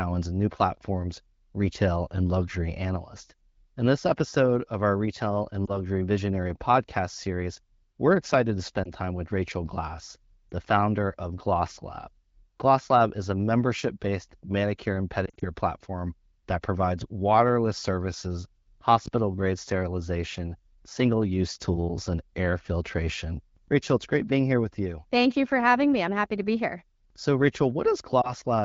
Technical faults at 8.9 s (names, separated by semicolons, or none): lost AMR speech frames